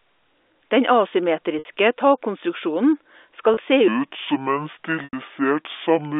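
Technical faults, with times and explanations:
1.59 s, 3.54 s and 5.04 s: packet loss with pitch repetition. The gaps last 60 ms, 30 ms and 90 ms, which suggests two, one and three lost packets. At each gap the receiver repeats the last pitch period to fill it and fades that over about 50 ms. The 30 ms gap sounds like a short, buzzy held tone. The 60 ms and 90 ms gaps outlast the fade, drop briefly to silence and return with a short cross-fade.
3.88 s to the end: section at the wrong speed. From here the audio plays at 0.632 times its recorded speed. Speed and pitch drop together, about seven semitones lower, so the sound turns deep and dragging at once rather than gradually. The likely cause is an editor or player running this part against the wrong clock. The narrow telephone band, 300 Hz to 3.6 kHz, comes from G.711 telephone coding working normally.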